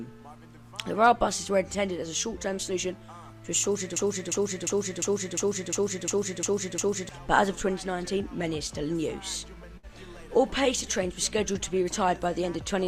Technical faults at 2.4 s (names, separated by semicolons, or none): none